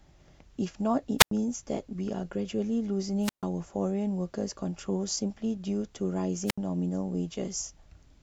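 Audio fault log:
1.18–1.31 s, 3.21–3.44 s, 6.46–6.58 s: wireless microphone squelch dropout. The transmitter's radio signal fades until the receiver's squelch mutes its output. Each event brings a brief swell of hiss, then a near-silent gap of about 93 ms, 138 ms and 71 ms before the speech returns.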